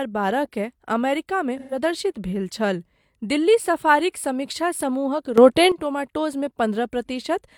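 AAC frame loss with concealment at 1.59 to 1.78 s, just after "बारहकेँ अमेरिकामे": about 128 ms of audio goes missing, which fits three lost AAC frames. The decoder fills the gap from the last good spectrum, leaving a smeared, noisy, phasey patch before "भेल छल दिल्ली सफारीक".

Sudden gain jump at 5.38 to 5.72 s, after "दिल्ली सफारीक समीक्षा समूहक": the speech and the background noise leap up together by about 11 dB from one instant to the next, then come back down at the end of the stretch. The likely cause is a digital gain change applied without a ramp.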